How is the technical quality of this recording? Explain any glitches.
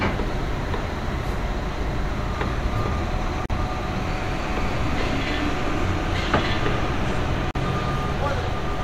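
Two short dropouts break the continuous sound. At 3.46 s and again at 7.51 s, a silence of about 40 ms opens and the sound resumes exactly where it stopped: a gap at a join of encoded pieces. Separately encoded segments were spliced without removing the encoder's start-up silence and last-frame padding. It sounds like a brief tick of nothing. On a waveform it shows as a flat stretch; on a spectrogram, a narrow vertical blank band with slightly smeared edges.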